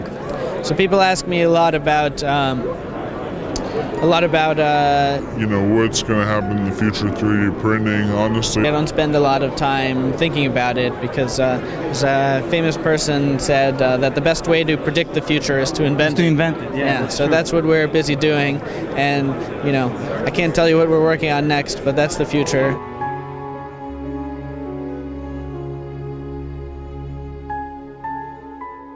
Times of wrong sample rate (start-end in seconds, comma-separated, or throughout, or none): 5.20-8.64